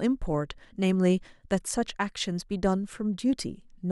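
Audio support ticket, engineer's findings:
No faults found in the speech recording; nothing to report for this ticket.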